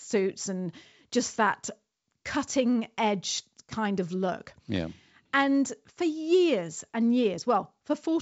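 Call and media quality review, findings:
No audible faults found.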